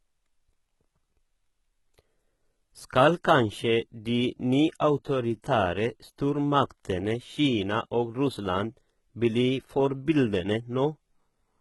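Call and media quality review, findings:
Gritty, lispy s sounds and a metallic sheen on the treble across the whole speech clip. Likely HE-AAC compression at a very low bitrate, around 16 kbps. Upper band rebuilt by spectral band replication. Copied harmonics misaligned above the crossover. Damage heavy.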